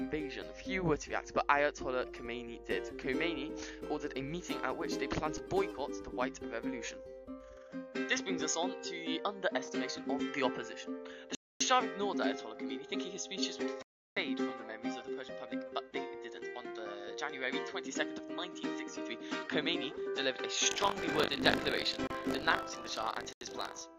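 From 7.57 s the sound turns duller, with a few decibels of level shift and a faint new noise floor. This is likely an input switched to a poorer device, with no gap at the change. Blocks of digital silence cut in at 11.35 s for 256 ms and at 13.82 s for 341 ms. Each is a hard hole. From 20.70 s to 23.82 s, buffer tearing adds a 50 Hz robotic buzz. A small slice of each buffer replays audio from around 40 ms earlier. Within that stretch, shorter silence blocks cut short holes at 22.07 s (30 ms) and 23.33 s (85 ms).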